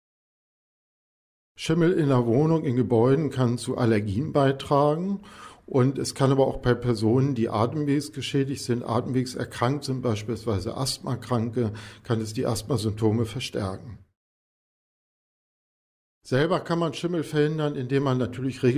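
No technical faults can be heard anywhere in the clip.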